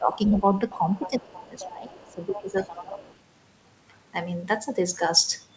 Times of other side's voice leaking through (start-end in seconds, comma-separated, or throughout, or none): 0.26-0.32, 0.70-3.15